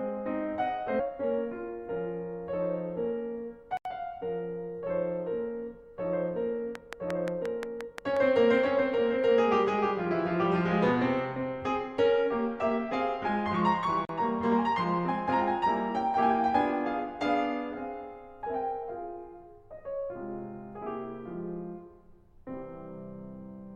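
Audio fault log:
0.99–1.10 s, skip ahead: The jitter buffer or the transport threw away roughly 0.7 s of music that had already queued up, and playback resumed at the later material with no filler between. The two sides of the cut are butted almost directly together, so the music lurches forward, and the playback delay shrinks by about the same amount as what vanished.
3.77–3.85 s and 14.05–14.09 s, block of digital silence: Twice the output buffer was handed zeros instead of samples, once for 80 ms and once for 40 ms, which points to the program missing its deadline to fill the buffer. The music drops to dead digital silence and snaps back with no fade. The longer gap registers as a brief hole, the shorter one closer to a pop.
6.75–8.18 s, train of clicks: A string of about ten near-identical pulses is laid over the music at a regular 5.67 per second, peaking roughly 15 dB above the programme. 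The likely source is electrical interference from nearby equipment or a faulty connection or power supply. The result is a steady, prominent ticking riding on top of the music for about a second and a half.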